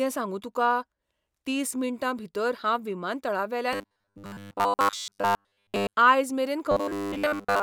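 Audio likely arrived too seldom, so the software repeated roughly 10 ms buffers, producing robotic sound from repeated short buffers: a metallic 100 Hz buzz from 3.73 to 5.93 s, mostly repeated, and from 6.72 s to the end, entirely repeated.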